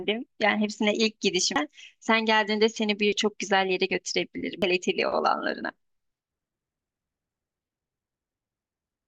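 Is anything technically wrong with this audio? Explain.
Yes. There's damaged data in the compressed stream, showing up twice in this speech clip: at 1.56 s and again at 4.62 s. Each time, a stretch of the encoded data is corrupt, so the decoder can't make sense of those frames, drops sync and has to hunt for the next valid frame header before it carries on. What you hear is a quick chirp, squawk, click or short hole cutting into the speech at each of those two moments.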